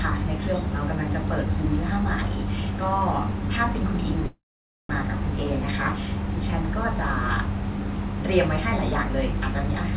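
From 4.26 s to 4.91 s the speech halts in a call audio freeze: a brief fading buzz of the last sound, then roughly half a second of silence. The cause is likely a jitter buffer that ran dry. Unlike a packet-loss dropout, nothing is skipped. The speech resumes exactly where it stopped, about 0.63 s late. Throughout, the band stops at 4 kHz, as expected of a narrowband telephone codec.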